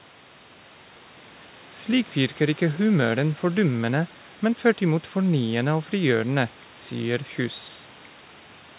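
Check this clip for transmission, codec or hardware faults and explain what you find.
No faults found.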